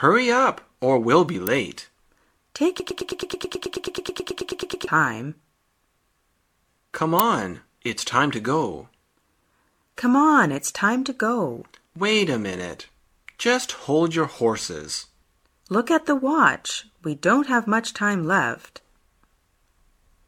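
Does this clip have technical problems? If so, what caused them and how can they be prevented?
Yes. An electrical switching spike is the likely cause of two sharp snaps, at 1.47 s and 7.19 s. A nearby switch, motor or static discharge arced, and the audio line picked up the brief burst of energy, which adds a tight click over the sound. Each is only a few milliseconds long. Routing audio cables away from power wiring and using balanced, shielded lines with good grounding would keep these arcs out of the signal.

A broken-record loop is the likely cause of the stretch from 2.80 s to 4.87 s. A player, encoder or stream stalled and kept resending the last fragment it held: a piece about 108 ms long repeats back to back, roughly nineteen times. Whatever should have played during those two seconds is gone. Larger buffers, stable network or disk throughput, and a player that falls silent instead of repeating on underrun would prevent this.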